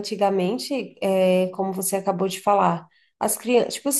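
No technical faults can be heard in this speech recording.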